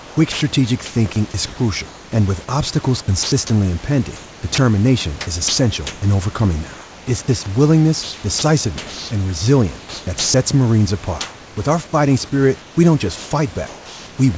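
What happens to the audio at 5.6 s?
The sender's voice detector is likely switching transmission on and off across the whole stretch from 0.0 to 14.18 s, including 5.6 s. About 3.6 s in total is replaced by comfort noise, so speech edges clip.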